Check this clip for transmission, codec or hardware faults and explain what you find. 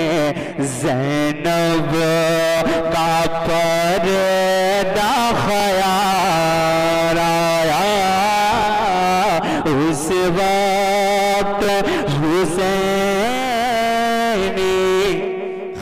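One fault is present: overlapping chunks. It occurs at 2.58, 5.60, 8.62 and 11.65 s, each lasting about 21 ms. The audio was handled in 3.0-second chunks, and each new chunk began slightly before the previous one finished. At every join, 21.33 ms of sound plays twice. The result is a click or stutter that returns at a steady rhythm, about every three seconds through the clip.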